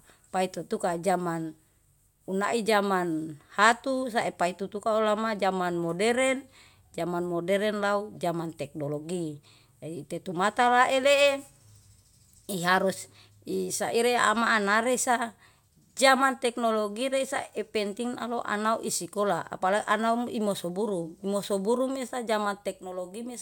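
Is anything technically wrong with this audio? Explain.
No, nothing technically wrong can be heard here.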